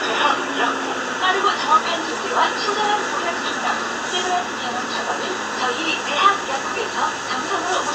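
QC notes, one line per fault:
No faults found, so there are no QC notes to log.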